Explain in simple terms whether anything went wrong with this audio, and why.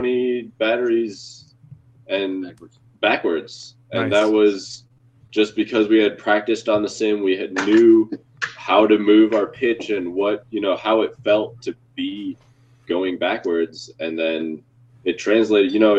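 Scattered short gaps, 4.19 to 5.36 s: about four tiny pieces were lost in transit, each patched by continuing the previous sound, causing brief hiccups.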